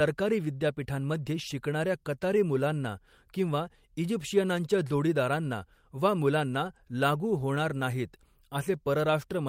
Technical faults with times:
none

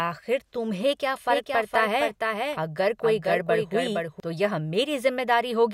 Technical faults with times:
1.30-4.20 doubled audio track

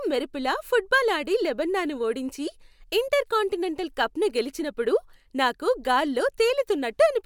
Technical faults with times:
none

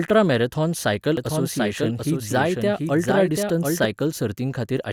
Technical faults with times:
1.17-3.85 doubled audio track

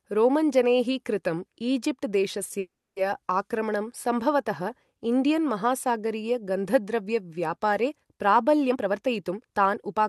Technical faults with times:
2.59-2.98 call audio freeze
8.70-10.03 jitter buffer speed-up

